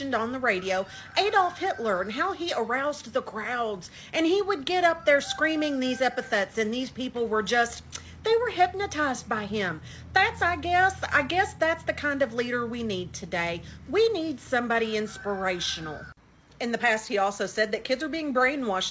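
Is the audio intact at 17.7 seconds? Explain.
Yes, the audio is intact at 17.7 seconds; the only thing to hear there is the call path's normal band limit, with nothing above 8 kHz, which fits a wideband call codec such as G.722.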